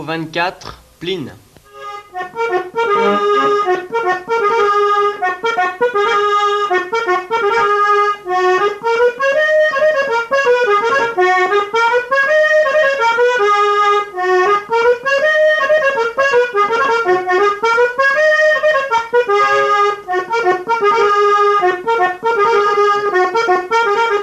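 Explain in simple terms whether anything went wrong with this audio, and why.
Nothing went wrong with this audio; there is no problem to explain.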